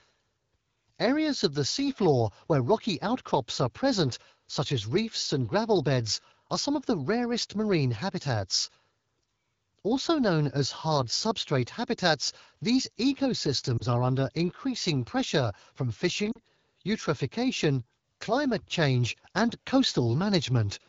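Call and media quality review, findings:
Lost AMR speech frames, 13.78–13.82 s and 16.31–16.39 s: short dip and warble in the speech, fitting one dropped 20 ms frame, then about two. Radio errors failed the frame checksum. The AMR-WB decoder concealed each gap by reusing the last good pitch and vocal tract settings at falling gain.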